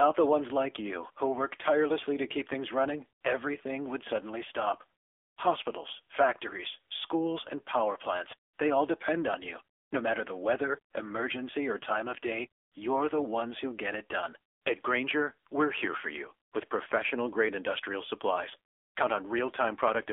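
From start to finish the speech carries AMR narrowband mobile codec damage. It is band-limited to roughly 300 Hz–3.5 kHz, with a low-rate buzzy, synthetic texture that fits AMR-NB around 7.4 kbps. On a spectrogram everything above 3.5 kHz is empty, and harmonics look smeared.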